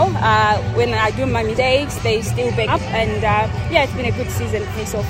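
Compressed frames skipped at 1.57, 2.67–2.70 and 4.75–4.77 s: missing 20 ms frames make the sound jump ahead roughly 0.1, 0.2, 0.1 s.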